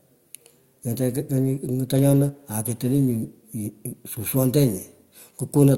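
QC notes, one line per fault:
Nothing to flag here, the speech runs along with no faults to note anywhere in the recording.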